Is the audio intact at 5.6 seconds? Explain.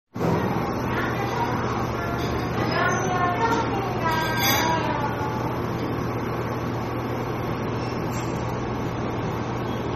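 No. At 5.6 s, as throughout, the sound shows plainly audible damage, likely from MP3 compression. The watery, swirly texture comes from weak frequency lines flickering frame to frame, which points to a bitrate around 32 kbps. A spectrogram shows a hard ceiling at 15.8 kHz with blotchy patches beneath.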